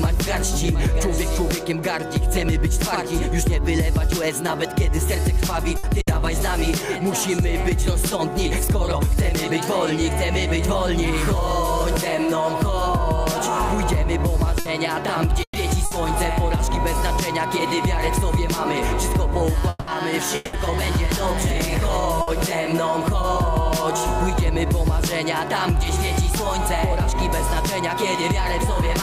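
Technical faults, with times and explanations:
5.77 s and 6.01 s, burst of packet loss: Each time a run of packets went missing. The player held the last sound for about 60 ms as a short fading buzz or hiss. The sound then jumps ahead, skipping about 60 ms.
14.59 s, 15.43 s and 15.85 s, burst of packet loss: The same short fades occur, about 60 ms each. At 15.43 s the fill lasts 120 ms and decays to silence for about 70 ms.
22.21 s, burst of packet loss: One more 60 ms fade and skip.
19.69 s and 20.35 s, long network dropout: Twice, about 0.7 s apart, the sound freezes into a held buzz or hiss lasting about 180 ms. At 19.69 s it thins to near silence briefly. At 20.35 s it resumes with no silent gap. Each time about 180 ms of audio is gone. The cause is likely a longer stall in arriving data, where concealment stretches the last sound until fresh audio returns.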